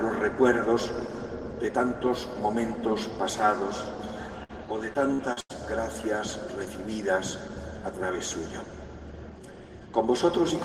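At 4.43 s there's a burst of packet loss lasting to about 4.52 s. Roughly 60 ms of audio never arrived, and the receiver filled about 55 ms by stretching the last bit of sound and fading it down. You hear a short held, dimming smear, then the audio picks up a little further along than where it broke off, so a sliver is simply gone.

From 4.93 to 5.51 s it turns into repeated packet loss, the robotic kind. Four separate gaps land in that half-second, the longest about 90 ms. Each one gets patched by extending the previous sound, and about a third of the stretch ends up concealed rather than real. The constant patching gives a choppy stutter with bits missing throughout.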